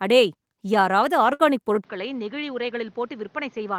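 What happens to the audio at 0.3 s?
Nothing goes wrong at 0.3 s; the speech plays through that moment intact, with no dropout, click or distortion.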